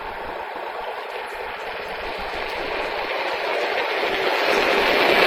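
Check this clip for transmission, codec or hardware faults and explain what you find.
One transmission fault is present: a call bitrate drop beginning at 2.98 s and lasting to the end of the clip. The audio loses detail and brightness, which fits the encoder's target falling from about 128 kbps to about 23 kbps as the call's bandwidth estimate collapsed. It sits at that floor for roughly 1.79 s. At such a low rate Opus quantises coarsely and trims the high band, so the sound becomes muffled, rough and watery, with no recovery before the clip ends.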